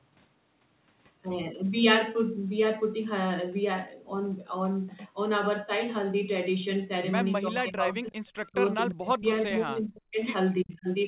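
From 7.48 to 8.17 s, and again at 8.51–8.57 s, the echo canceller likely could not tell the talker from loudspeaker echo while both sides spoke. It pulled the speech down by around 15 dB, then by about 25 dB. This is speech suppressed in double talk, and it sounds like a sudden dip in level. The same fault returns at 8.93–9.26 s, 9.45–10.17 s and 10.63–10.88 s, with drops as deep as about 40 dB that cut the speech out in pieces. Overlapping this, an echo leak appears at 8.90–8.94 s: the canceller on the loudspeaker side likely let part of its loudspeaker pickup through. It comes back as a very faint copy of the speech delayed by 342 ms, a brief scrap beneath the talker.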